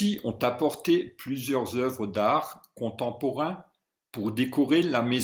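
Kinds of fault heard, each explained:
No audible faults are heard in this speech clip.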